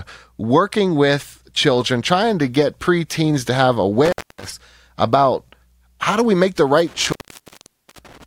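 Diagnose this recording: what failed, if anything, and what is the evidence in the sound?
Intermittent contact in the analogue wiring, probably a loose plug or a cable that's going. The line drops out twice. The first time is between 4.05 and 4.45 s, just after "get preteens to have" and before "about how do we", and it's open for about 260 ms. The second time starts at 6.87 s after "do we make the" and lasts to 8.24 s, with the signal gone for about 860 ms. Each dropout has crackle where the contact breaks and remakes, and faint hiss fills the gap while the circuit is open.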